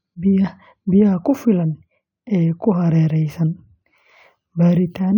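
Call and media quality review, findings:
No audible defects found in the speech path; nothing to attribute to any component.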